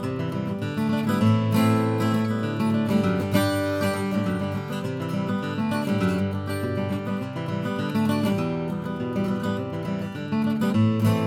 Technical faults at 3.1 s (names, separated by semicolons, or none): none